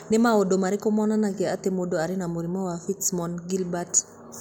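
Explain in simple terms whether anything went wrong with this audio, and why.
Nothing went wrong with this audio, as no faults can be heard anywhere in it.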